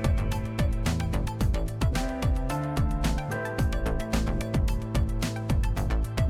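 Dropped samples, likely from a stream briefly skipping ahead, at 1.03 s and again at 5.03 s: a fraction of a millisecond of audio goes missing, so the waveform jumps abruptly to a later value. Each time, a single sharp click stands out.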